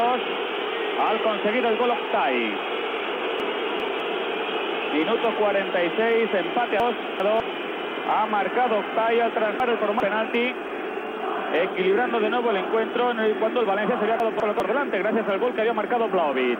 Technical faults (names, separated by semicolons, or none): chunks out of order